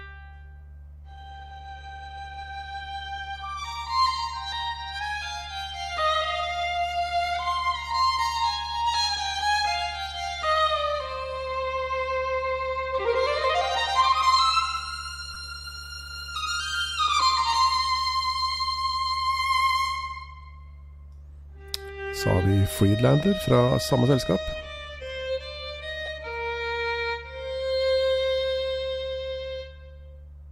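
Two short dropouts from lost LE Audio frames, at 15.34 to 15.36 s and again at 26.06 to 26.08 s. Each gap is only about 15 ms, which fits a couple of missing frames. The LC3 decoder papers over them by replaying the last spectrum with scrambled signs, so you hear a quick grainy, noisy smear in place of the real sound. The gaps are too short for the concealment to fade down to silence.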